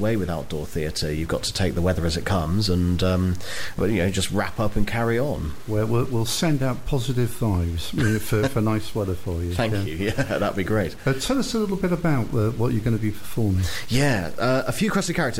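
Throughout, the audio has a harsh, buzzy distortion, and pauses fill with noise. The likely cause is a stuck bit, shifting many values by a step of about -45 dBFS. Spectrograms show broadband hash even in gaps, and the waveform never settles flat.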